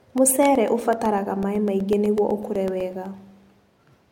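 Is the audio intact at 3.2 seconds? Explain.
No. Periodic USB or driver dropouts run from 0.06 to 4.06 s: every 0.125 s the driver stalls, replacing about a millisecond of speech with silence, heard as regular ticks.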